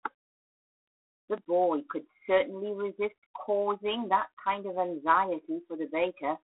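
Throughout the speech, G.726 ADPCM coding is plainly audible: a harsh, rasping hiss rides on the voice and swells and fades with its level, the signature of too few bits coding each sample's difference from an adaptive prediction, which fits the 24 kbit/s mode. The line band runs from 250 Hz to 3.6 kHz, with nothing above 3.9 kHz. Unlike a simple band-limited telephone line, the grit here tracks the speech rather than sitting at a steady floor.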